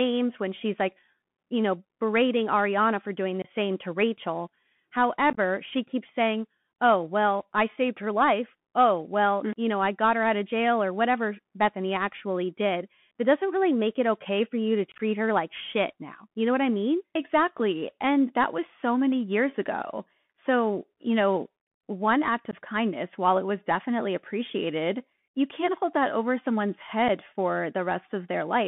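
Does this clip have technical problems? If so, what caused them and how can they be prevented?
Yes. The whole clip runs through a Bluetooth CVSD headset codec, which fits a 64 kbps narrowband link. The sound is squeezed into roughly 150 Hz to 3.5 kHz, so it's thin with nothing up top. CVSD encodes each sample as a single up-or-down bit with an adapting step size, and that step can't keep pace with loud, bright sounds. The damage is plainly audible: s sounds go scratchy, and a grainy hiss sits under the speech. To prevent it, make sure the headset connects in wideband (mSBC or LC3) mode, or record with a wired mic.

There's also unconcealed Bluetooth headset packet loss. Short voice packets between headset and phone went missing, and silence or an idle pattern filled the gaps instead of anything smoothed over. That leaves abrupt little holes, after which the sound comes back quieter for a moment. 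They fall at 3.42–3.45 s, at 5.30–5.38 s just before "she keeps saying oh", at 14.92–15.01 s, at 22.51–22.53 s between "you know one act" and "kindness while it was", and at 27.08 s right after "hold that over someone's". At 5.30 s and 14.92 s the losses are scattered over about 75 ms, so they sound choppy. To prevent this, keep the phone close with a clear line of sight and reduce 2.4 GHz interference nearby.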